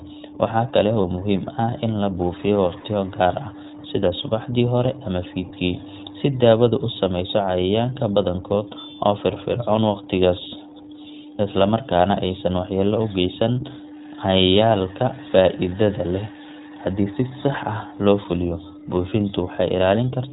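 From the start, the speech runs through the iLBC codec at 15.2 kbps. Each 20 ms frame is coded on its own in narrowband, so nothing above 4 kHz survives and the speech sounds plainly rough and synthetic. A spectrogram shows a hard ceiling at 4 kHz.

There are lost iLBC frames at 1.02 to 1.05 s, again at 2.80 to 2.84 s, and at 19.10 to 19.13 s. The second gap is longer and fits two missing 20 ms frames. The decoder filled each hole by repeating the last pitch cycle mixed with noise, which is heard as a brief held, buzzy vowel. On a spectrogram these spots appear as short stretches of flat, repeated harmonics. Normal speech resumes immediately after each one.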